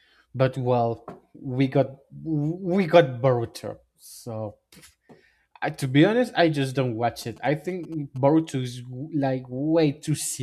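GSM signalling bursts intrude on this speech recording from 7.22 to 8.18 s, just after "honest I just don't": a galloping dit-dit-dit of brief 217 Hz buzzes, sitting roughly 25 dB below the speech. A nearby 2G phone exchanging signalling transmitted short radio bursts, which the audio circuitry rectified into audible clicks.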